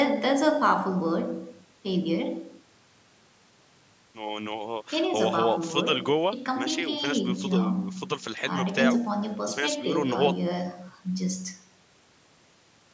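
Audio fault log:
No faults heard.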